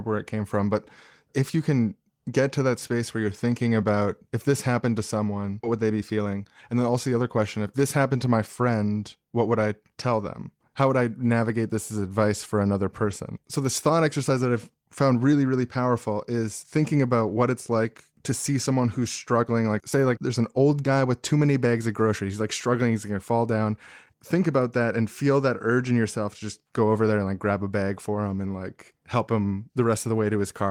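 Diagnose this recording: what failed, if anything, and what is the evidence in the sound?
Network jitter buffer, skip ahead. At 5.63 to 5.65 s, right after "this happened to someone", roughly 0.4 s of speech vanishes. Both sides join with no gap.

Jitter buffer speed-up. From 5.73 to 7.65 s, ending before "this happened to my", speech runs at 109% with unchanged pitch. Removing small pitch-period pieces cut about 0.2 s.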